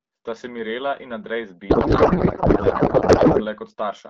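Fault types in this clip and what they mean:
Codec payload misread: from 1.69 to 3.46 s the speech turns into garbled noise and warble that barely tracks it. This fits octet-aligned AMR frames being unpacked as bandwidth-efficient ones, so every field is read from the wrong bit position. Unlike packet loss, which leaves brief gaps or smeared repeats, the audio here keeps flowing as confident nonsense for the whole stretch, then snaps back to clean AMR wideband speech once the framing lines up again.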